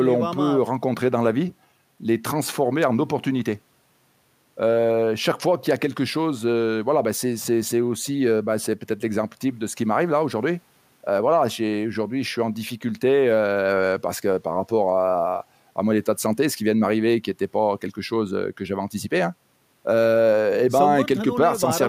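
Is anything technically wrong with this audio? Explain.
No, nothing technically wrong can be heard anywhere in this speech recording.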